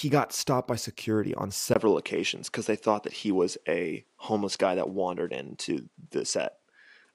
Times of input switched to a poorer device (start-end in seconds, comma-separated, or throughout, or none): 1.74-7.14